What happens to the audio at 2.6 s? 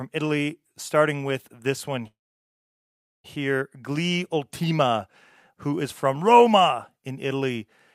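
At 2.6 s the audio is inside a call audio freeze running from 2.07 to 3.26 s, just after "starting with this one". The last sound trails on as a brief fading buzz or hiss, then drops to near silence for about 1.1 s. Packets were likely held up in transit, so the jitter buffer ran dry. The speech then resumes where it stopped. Nothing is lost, but everything after arrives about 1.17 s later.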